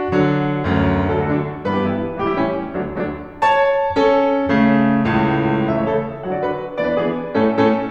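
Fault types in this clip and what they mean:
Lost LE Audio frames: a dropout from 2.98 to 3.00 s, fitting two 10 ms frames, where the decoder's filled-in spectrum with randomised phase smears the music into brief noise.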